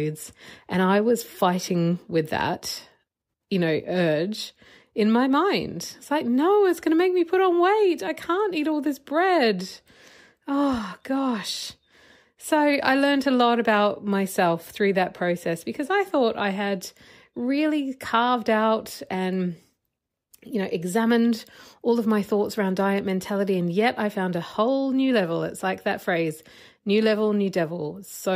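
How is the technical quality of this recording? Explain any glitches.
Nothing stood out as a technical problem on listening to this speech recording.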